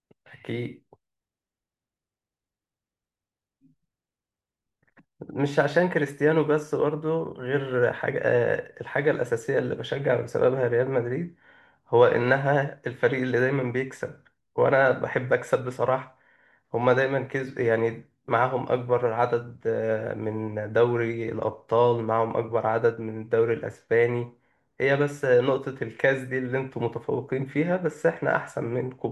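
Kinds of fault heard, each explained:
No technical faults can be heard.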